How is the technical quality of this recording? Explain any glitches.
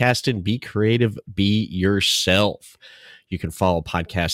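Nothing in the recording registers as a technical fault, so there are no glitches to explain.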